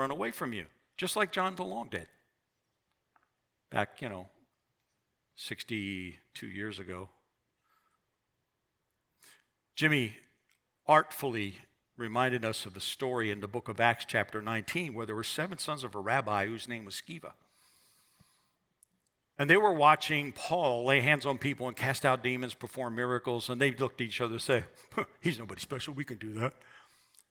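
Nothing in this speech recording stands out as a technical fault. It carries the light marks of Opus voice compression, which at about 24 kbps runs in hybrid mode with SILK and a CELT layer and keeps the full audio band.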